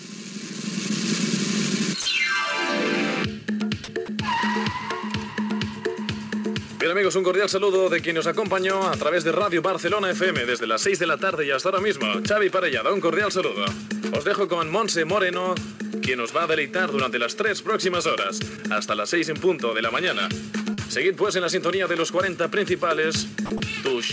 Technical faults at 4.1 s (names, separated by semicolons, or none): sound dropped by the voice detector